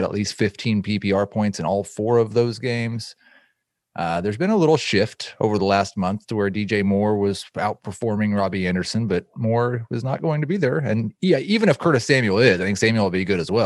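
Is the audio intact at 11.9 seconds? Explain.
Yes, the speech plays through cleanly at 11.9 seconds, with no dropout, click, distortion or other fault at that moment.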